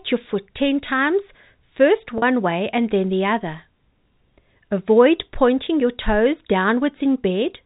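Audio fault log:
2.18 to 2.22 s, packet loss with pitch repetition: about 40 ms of audio goes missing, which fits a couple of 20 ms telephone packets dropping out. The receiver fills the hole by looping the last pitch period it had, so you hear the sound briefly hang on one buzzy, slightly frozen tone before the real signal cross-fades back in. It rides on the narrowband G.711 telephone sound, which cuts everything above 4 kHz.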